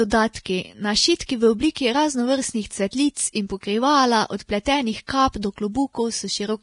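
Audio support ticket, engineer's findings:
Grainy, hissy treble throughout, nothing above 10.6 kHz. Likely Vorbis compression at heavy damage, consistent with about 32 kbps; the noise-filled residue sets it apart from simple low-pass filtering.

Pre-echo at 1.19 s (14 ms), 1.26–1.29 s (31 ms), and 5.07 s (19 ms) between "in pokrivala od pletenih" and "kap do". Block-spread hiss arrives before the attacks, not after them as reverb would.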